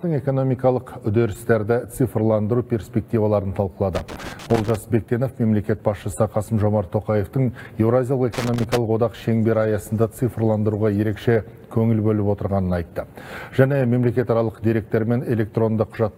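From 3.95 to 4.76 s and again from 8.34 to 8.77 s, loose connector crackle chops the audio into irregular scratchy bursts, as a worn contact makes and breaks. Unlike evenly spaced digital clicks, its timing is ragged and clustered.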